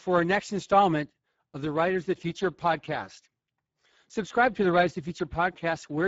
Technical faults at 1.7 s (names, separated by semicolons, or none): Speex codec